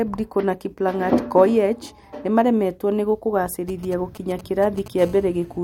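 From 3.69 s to 4.88 s, GSM signalling bursts break in: a galloping dit-dit-dit of brief buzzes pitched at about 217 Hz, sitting well below the speech. A nearby 2G handset is exchanging short bursts of control traffic with the network, and the audio circuitry rectifies that radio energy into sound. The gaps between groups separate this from mains hum or a steady interference tone, which never stop.

From 4.99 s to 5.59 s the pattern becomes a GSM phone buzz: a continuous, hard, raspy 217 Hz drone rich in harmonics, about 25 dB below the speech and unrelated to it. With the handset now in a call, it transmits a burst every frame, 217 times a second, so the rectified pulses fuse into an unbroken tone. This continuity, rather than the earlier stuttering clusters, is what separates call traffic from signalling.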